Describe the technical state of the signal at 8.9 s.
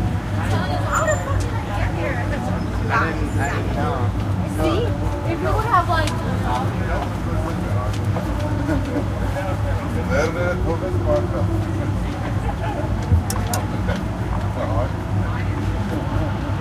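At 8.9 s the signal is intact, with no dropout, distortion, glitch or other technical fault to be heard.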